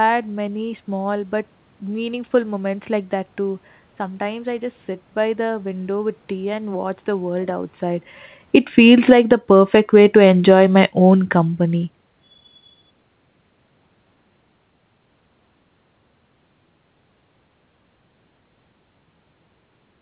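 Automatic gain falling: the gain control judged the input too loud or its background noise too strong and eased its gain down, by about 8 dB from 8.45 to 9.33 s, then about 3 dB from 9.93 to 12.03 s. The voice and room noise sink together.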